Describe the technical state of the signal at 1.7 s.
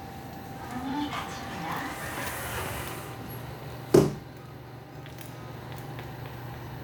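At 1.7 s the signal is intact, with no dropout, clipping, glitch or other technical fault present at that moment.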